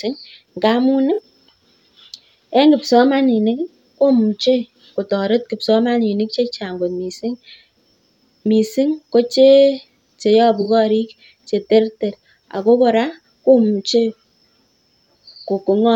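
At 1.14 to 1.19 s, and again at 10.61 to 10.66 s just before "korik che terter", there's AAC frame loss with concealment. Each gap is about 43 ms, which fits two lost frames. The decoder covers the hole by reusing the last good spectrum with reshuffled phase, so rather than a dropout you hear a brief smeared, noisy, phasey blur where the speech should be.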